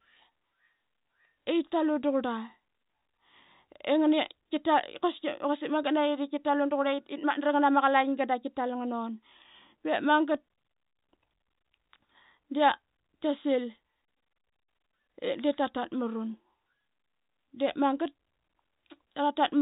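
There are no technical faults to describe in time order; the speech simply carries the G.711 telephone band, with nothing above 3.8 kHz.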